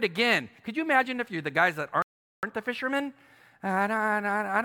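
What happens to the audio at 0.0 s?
Nothing goes wrong at 0.0 s; the audio is intact at that moment.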